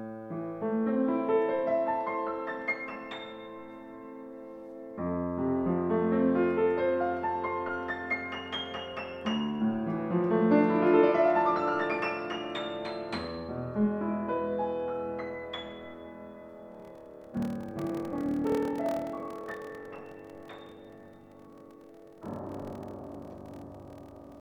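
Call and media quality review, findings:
Block size mismatch (padded), 16.70 s to end: writer blocks short of reader size, which fits 1024-sample writes, zero-filled. 38.3 Hz buzz; playback slowed to 0.889x, timbre unchanged.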